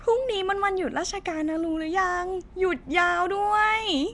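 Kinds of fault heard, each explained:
Nellymoser compression: the speech has a rough, hissy halo and a smeared, underwater blur throughout, with nothing above 10.6 kHz, likely from Flash's Nellymoser Asao codec at a rate near 44 kbps. Unlike MP3's watery swirl, weak bands return as grainy noise.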